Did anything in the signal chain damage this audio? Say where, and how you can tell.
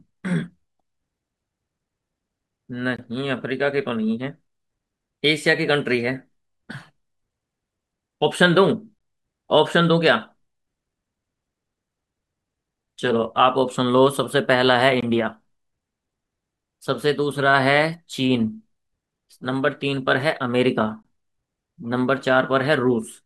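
Yes, there's a gap between chunks, most likely from chunked storage or playback. The speech drops to dead silence for 20 ms with hard edges at 2.97–2.99, 8.99–9.01, 15.01–15.03 and 21.03–21.05 s. They repeat every 6 seconds of audio, so it looks like 6-second chunks being joined with a short stretch of silence at each boundary. Nothing is missing from the speech; it's just interrupted at every join.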